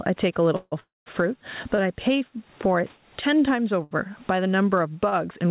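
Throughout the speech, the level breathes with gain pumping, a swing of around 15 dB. The likely cause is a microphone gain set far too high, with a fast limiter hauling it back on every peak. The speech itself sounds squashed.

Between 0.56 and 0.74 s there is a call audio freeze. The last sound carries on as a fading buzz for about 156 ms, with a brief drop to silence at the end. A second freeze from 0.80 to 1.08 s fills 264 ms, and most of that, about 190 ms, is silence. The likely cause is packets held up in transit until the jitter buffer ran dry. The speech then resumes exactly where it stopped, so nothing is lost and a gap is inserted instead.

Short stalls from a late packet follow at 1.75 to 1.80 s, 3.83 to 3.93 s and 5.09 to 5.14 s, holding a sound for about 28, 74 and 30 ms. Each is a brief stretched moment. Unlike the freezes, they never fade to silence, and the speech picks up again almost at once.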